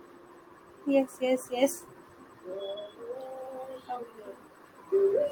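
Throughout the speech, clock drift between sender and receiver is present: the sender's clock runs roughly 2% slow, so the jitter buffer keeps draining and the receiver must stretch playback to avoid running empty.

From 0.20 s to 5.24 s, repeated timing corrections appear as the receiver repeats short pieces, all in the same direction and unevenly spaced. Playback runs at 98% speed, adding around a tenth of a second overall.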